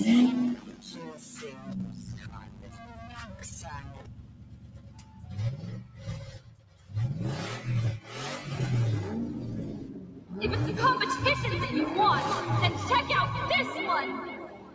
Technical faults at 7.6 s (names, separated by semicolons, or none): noise suppressor applied to music or sounds